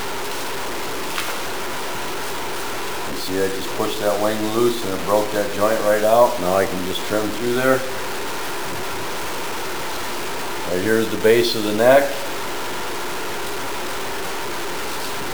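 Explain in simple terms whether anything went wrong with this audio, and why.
Grainy, gritty distortion runs through the whole clip, from start to finish. The likely cause is low bit depth without dither. The sound seems stored with very few levels, which fits 5-bit audio, and rounded down crudely. Quiet moments turn rough or sputter.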